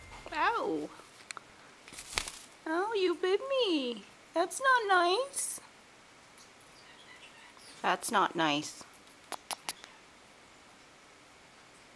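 Nothing in the audio points to a technical fault. There is no moment here that calls for a time stamp or an explanation.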